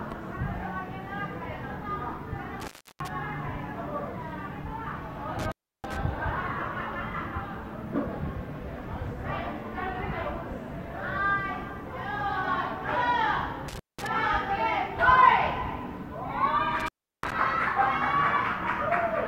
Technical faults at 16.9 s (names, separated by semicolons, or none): intermittent contact